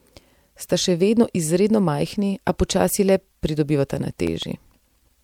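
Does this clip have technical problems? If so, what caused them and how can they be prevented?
Yes. The speech carries CD scratch ticks from 3.97 to 4.88 s. Seven short ticks fall at a steady rate of about seven or eight a second. The longest lasts only a few milliseconds. A scratch on the disc passes the laser once per turn. Each time, it ruins more data than error correction can rebuild. The player then fills or mutes those samples, which makes each tick. Cleaning the disc, or ripping it with a secure, re-reading ripper, prevents this.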